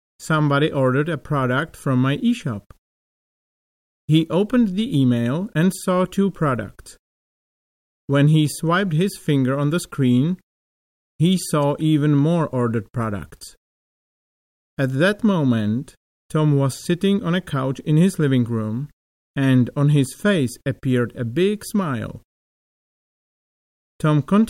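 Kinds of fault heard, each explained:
No technical faults heard.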